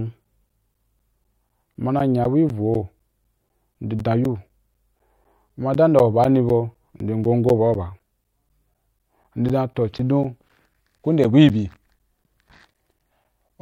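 Periodic USB or driver dropouts run from 0.24 s to 13.50 s. Something on the system is blocking the USB bus or the audio driver every 0.25 s, and each time roughly 10 ms of the speech is lost and replaced with silence. Around fifty of these gaps fall across the clip. They come through as a steady train of small ticks, four per second, which sound wherever the voice is present and disappear in the pauses.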